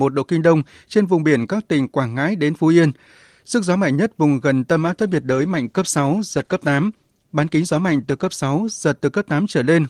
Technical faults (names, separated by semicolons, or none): call bitrate drop